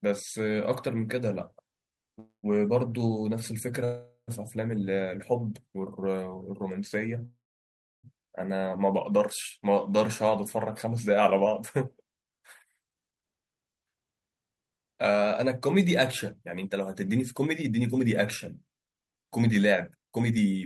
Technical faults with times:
2.19-2.46 call audio freeze
3.85-4.30 call audio freeze
7.25-8.06 call audio freeze
12.74-20.60 jitter buffer speed-up

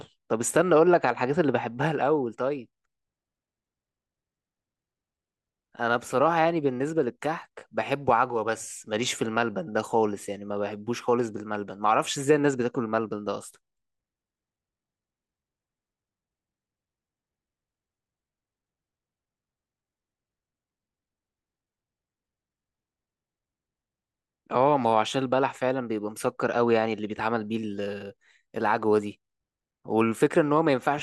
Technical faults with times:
none

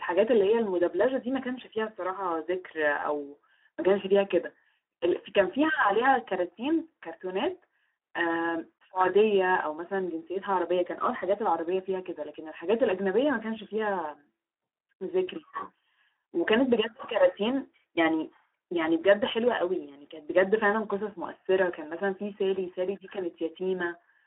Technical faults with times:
0.00-24.27 Speex codec

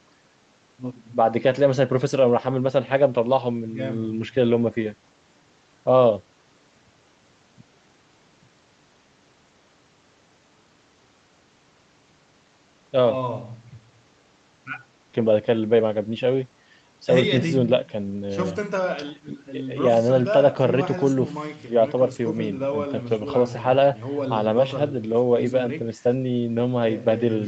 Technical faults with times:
none

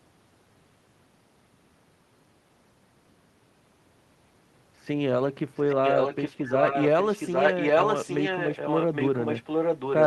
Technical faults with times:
5.55-10.07 echo leak

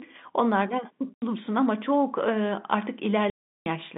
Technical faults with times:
1.14-1.22 packet loss filled with silence
3.30-3.66 packet loss filled with silence

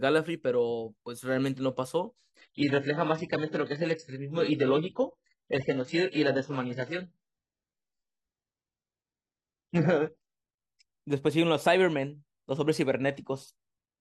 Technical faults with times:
2.36-10.36 adaptive stream at a lower bitrate

